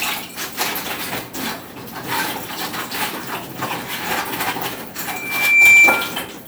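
A microphone was picking up the loudspeaker it fed, closing a loop whose gain exceeded one at 2.4 kHz. From 5.08 to 6.17 s this loudspeaker feedback squeal swells over about half a second into a piercing steady tone well above the surrounding sound.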